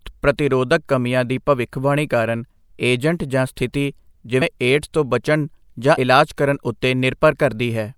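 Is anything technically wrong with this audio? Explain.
Yes. The speech has two compressed frames skipped events, at 4.41 s and at 5.97 s, the second between "ਤੋਂ ਬਚਣ ਜਾਂ" and "ਇਲਾਜ ਕਰਨ". Whole coded frames were missing or rejected by the decoder, so the audio jumps ahead by roughly 50 ms and 70 ms. That fits two and three frames of a codec with 24 ms frames. At each join the speech jumps ahead.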